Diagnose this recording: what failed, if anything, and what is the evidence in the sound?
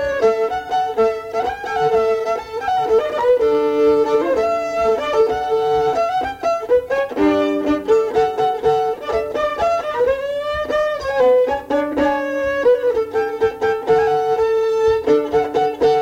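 Nothing in the recording points to a failure at any stage of the chain. The sound holds steady throughout, with no audible sign of trouble to trace to a cause.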